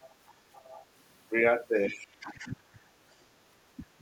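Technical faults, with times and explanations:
0.01–0.15 s, 0.54–0.86 s and 1.87–2.06 s: other side's voice leaking through. A faint second voice sits underneath the talker, around 25 dB down, in three short scraps. The far end's audio is likely playing on the talker's loudspeaker and reaching the microphone, with the echo canceller leaving a residue. Unlike double-talk suppression, this fault takes nothing away from the talker. Something extra is heard, a separate voice laid on top.
0.62–0.76 s, 1.89–2.9 s, 3.3–3.39 s and 3.76–4.01 s: speech suppressed in double talk. The talker's own voice sinks, by roughly 10 dB in the first dip, about 30 dB across the second (which lasts about a second), and around 25 and 20 dB in the last two. It likely happens because the echo canceller, faced with both sides talking at once, turned everything down. The first two dips begin inside leak stretches. The difference from leakage is that the talker's voice goes missing rather than a second voice appearing.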